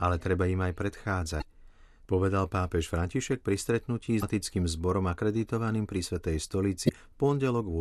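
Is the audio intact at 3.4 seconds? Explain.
Yes, the audio is intact at 3.4 seconds, with no dropout, click, distortion or other fault at that moment.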